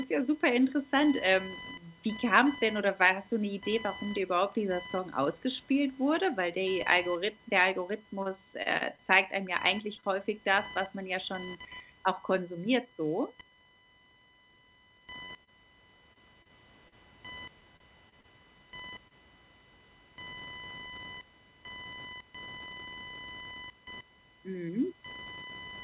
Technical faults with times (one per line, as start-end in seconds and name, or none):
0.00-25.84 computer activity noise
8.03-10.06 repeated packet loss (robotic sound)
11.96-12.94 jitter buffer speed-up
15.25-19.13 repeated packet loss (robotic sound)
20.16-21.34 jitter buffer speed-up